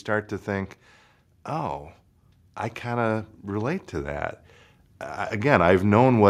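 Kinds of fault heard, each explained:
Nothing here stands out as a technical fault; the speech just comes through without any glitch worth pointing to.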